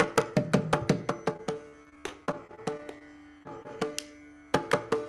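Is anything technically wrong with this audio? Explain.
Yes, the audio has two kinds of packet-loss fault.

From 1.33 to 3.02 s there is repeated packet loss (robotic sound). Sixteen gaps, about 220 ms of audio in total and none longer than 41 ms, never arrived in time. The receiver covered each hole by extending the preceding sound, so about 16% of that stretch is synthetic fill, heard as choppy, robotic audio with pieces dropped. A spectrogram shows repeated short blocks of smeared, frozen texture breaking up the normal detail. The waveform shows many brief segments with an unnaturally repetitive shape.

Short concealed packet loss follows at 3.38 to 3.43 s, 3.43 to 3.47 s and 3.63 to 3.67 s. In each event about 20 ms never reached the decoder. The gap was patched by continuing the last sound, from its pitch or as shaped noise, and then blended back into the real signal. Each event is heard as a brief smear or wobble, and a short sound can disappear. 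On a spectrogram these show as narrow patches of blurred, held texture.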